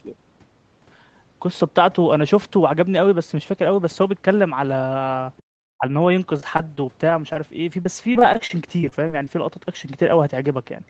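At 5.37 s a faint second voice slips in for about 50 ms, very quiet under the talker, only a scrap. This is likely the other side's voice leaking through: the far end played on the loudspeaker and the echo canceller left a trace in the microphone.

Right after, from 5.42 to 5.50 s, the room background drops away, falling by about 40 dB, then comes back. That is background gated by the echo canceller, which clamped the microphone hard while the loudspeaker was active and released it once the far end fell quiet.

From 5.78 to 5.85 s the talker's own voice dips sharply, around 30 dB down for a moment under a tenth of a second. The cause is likely speech suppressed in double talk: with both sides talking, the canceller could not separate the talker from the echo and attenuated both.

From 6.37 to 7.37 s and again from 7.83 to 9.29 s the speech turns choppy and robotic, with a string of tiny holes, the longest about 22 ms and 27 ms. 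About 10% and 13% of those stretches are patched sound. This is repeated packet loss: packets kept arriving late or not at all, and each gap was filled by stretching the previous sound, so the patches stack up one after another. Throughout, the call's Opus path keeps everything below 8 kHz.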